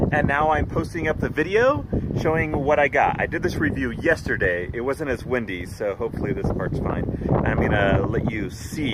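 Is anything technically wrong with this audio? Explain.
No, nothing in this audio points to a technical fault in its capture, transmission or playback.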